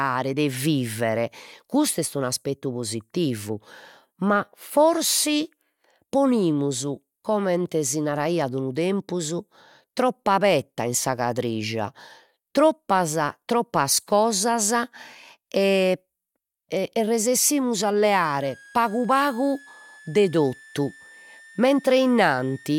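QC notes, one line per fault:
18.23–22.78 s, switching supply whistle: a switching power supply near the recording chain drops into an audible burst mode as its load shifts, and its cycling leaks into the signal. The result is a thin, high whistle sitting around 25 dB below the speech and wandering between 1.61 kHz and 1.84 kHz, so it sounds like a tone near 2 kHz that drifts rather than holds steady until the clip ends.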